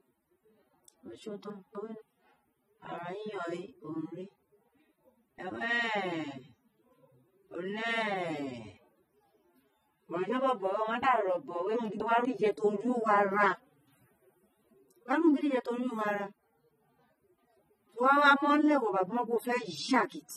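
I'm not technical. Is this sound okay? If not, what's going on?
No. Throughout, the speech has plainly audible compression damage and nothing above 15 kHz; this is likely AAC compression, which squeezes the file by discarding detail.

At 1.5 to 2.0 s and again at 11.75 to 12.25 s, the speech briefly jumbles: chunks out of order, where two quarter-second pieces play swapped.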